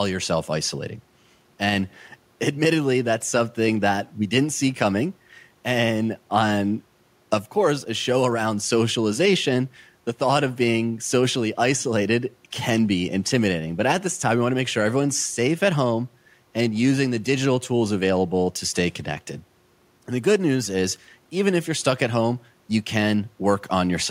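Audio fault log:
No faults found on listening through the speech.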